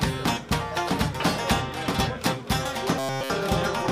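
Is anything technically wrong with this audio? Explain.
Yes. From 2.99 to 3.30 s there is robotic sound from repeated short buffers. The audio turns into a rigid, metallic buzz at 134 Hz. The likely cause is a tiny chunk of about 7.5 ms looping throughout that stretch while fresh audio is skipped.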